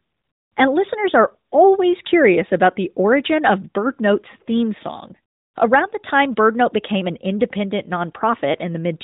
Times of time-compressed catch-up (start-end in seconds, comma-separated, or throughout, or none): none